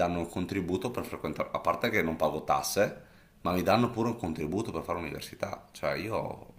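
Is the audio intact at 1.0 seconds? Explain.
Yes, the audio is intact at 1.0 seconds, with the speech continuing there without any audible fault.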